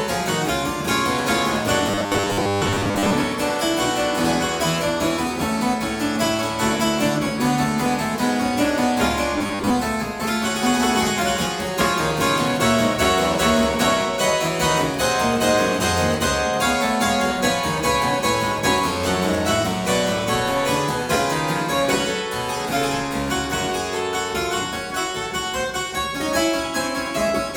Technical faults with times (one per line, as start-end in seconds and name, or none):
1.91-3.14 robotic sound from repeated short buffers
9.38-9.70 robotic sound from repeated short buffers